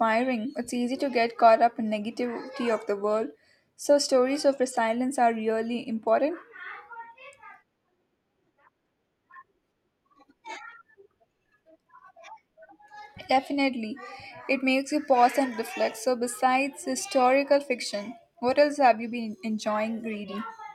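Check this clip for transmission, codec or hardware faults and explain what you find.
One transmission fault is present: channel delay, heard as comb filtering. It runs from 0.0 s to about 14.53 s, ending just before "makes you pause and". One channel arrives a tiny fraction of a millisecond late, which points to a lag of about one sample. When the two are summed to mono, shared content cancels at evenly spaced frequencies. Here the first notch sits near 20 kHz. The speech sounds dull, with the very top end softened.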